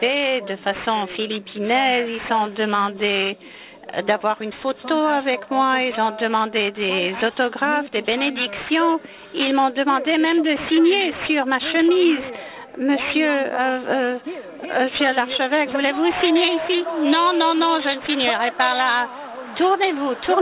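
The sample rate was cut without an anti-aliasing filter first, which fits a drop from 44.1 kHz to 8 kHz, so the recording suffers aliasing from start to finish. Everything above the 4 kHz fold point mirrors back down into the band as false, unrelated tones, sitting only about 15 dB below the wanted sound. The result is a gritty, metallic edge on bright, hissy content, and the spectrum runs hard right up to 4 kHz instead of rolling off.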